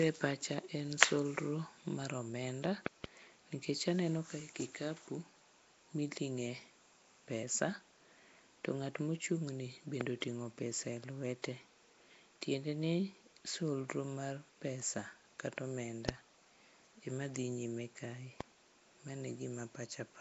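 Nellymoser compression runs throughout, with plainly audible damage: the speech sounds rough, hissy and smeared, with nothing above 7.7 kHz. This is likely from Nellymoser Asao coding, and the sound fits a 32 kbps stream.

Loud pops sit over the speech, which continues underneath them:
2.86 to 3.06 s: two pops in quick succession, about 20 dB above the speech.
10.01 s: one pop, about 20 dB above the speech.
16.09 s: one pop, about 25 dB above the speech.
18.41 s: one pop, about 15 dB above the speech.
Each is likely a sudden voltage step or pulse from a plug, switch, static or driver glitch.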